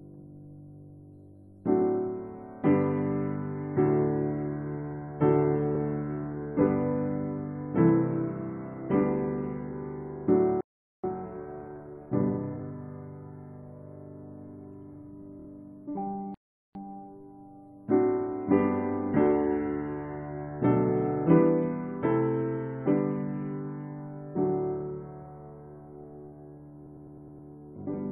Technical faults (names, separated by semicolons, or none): repeated frames; playback stall; time-compressed catch-up